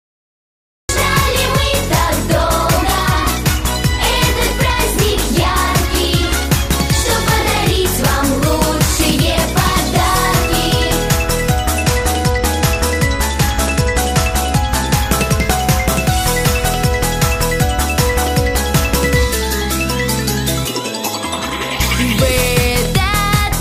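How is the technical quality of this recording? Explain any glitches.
The recording has two clear technical faults, one at the very beginning and one in the middle.

From 0 to 0.89 s there is dead digital silence, and then the audio jumps straight in partway through a sound, with no natural attack or fade-in. This is a cut-off start. Capture or streaming began late, so the opening of that sound was never recorded, and playback switches from nothing to full level at 0.89 s.

Between 11.78 and 14.95 s the treble turns dull and a gritty, grainy noise rises under the audio. It clears once that stretch ends. This is a Bluetooth SBC bit pool drop. The wireless link came under strain and the sending device cut the SBC bit pool to keep audio flowing. The dip fits a fall from 31 to about 14, near 99 kbps. With so few bits, the upper sub-bands got little or nothing, causing the lost brightness. The remaining bands were coarsely quantised, causing the grit.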